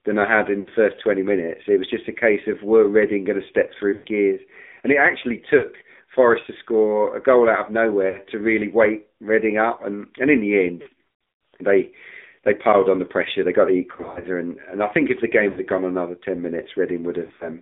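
Speech heard through the AMR narrowband mobile codec, at a rate that fits AMR-NB near 7.4 kbps. The line passes only about 250 Hz to 3.6 kHz, so a spectrogram shows nothing above that. The coding damage is plainly audible: a buzzy, synthetic voice rebuilt from a vocal-tract model and sparse pulses. Lost AMR speech frames break the audio at 0.60–0.69, 3.94–4.06, 5.58–5.65 after "it actually", 8.10–8.19 between "a goal out of" and "to really", 10.82–10.88, 13.92–14.27 between "got the" and "and and I think", 15.50–15.60, and 17.26–17.49 s. The decoder repeats the last good pitch and filter settings at falling gain, so each gap of 40 to 180 ms sounds like a smeared, fading warble. On the waveform these gaps appear as tapering envelopes, and on the spectrogram as frozen, stretched harmonics. The 13.92 and 17.26 s events are scattered runs of short losses rather than single holes.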